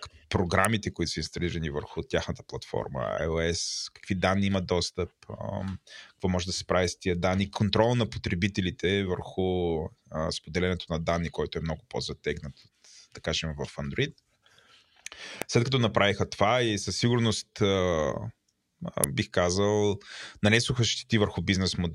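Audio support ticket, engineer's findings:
Sharp snaps over the speech at 0.65 s (just before "които са инсталирани върху"), 15.42 s, and 19.04 s (just before "бих казал нанесоха"). Electrical switching spike, likely a nearby switch or static arc coupling into the line. Peaks near -10 dBFS, the last louder, near -5 dBFS.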